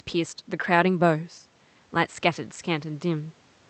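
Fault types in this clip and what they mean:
No faults found; the speech runs through an Opus call path whose audio bandwidth tops out at 8 kHz.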